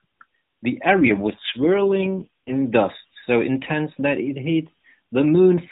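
From 1.00 to 2.62 s an AMR rate drop makes the speech rougher and buzzier, which fits a fall from 12.2 to 4.75 kbps. The 4 kHz narrowband ceiling stays put with no gap, but harmonics on a spectrogram smear and lose definition until the rate recovers.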